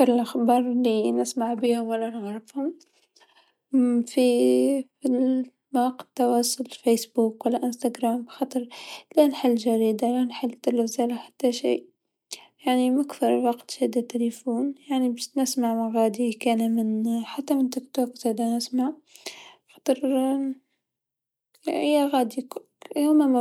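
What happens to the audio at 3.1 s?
Nothing goes wrong at 3.1 s: the speech plays through that moment intact, with no dropout, click or distortion.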